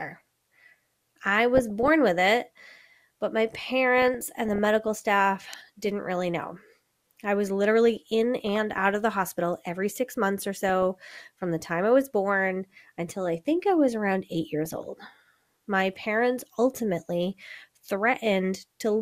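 An electrical switching spike lands at 5.53 s in this speech clip, just before "didn't really know": a sharp snap lasting about a millisecond, sitting on top of the speech rather than replacing it. The likely cause is a nearby switch, motor or static discharge throwing off a brief arc that the audio line picked up as a sudden voltage jump, so the click arrives with no acoustic build-up or decay of its own.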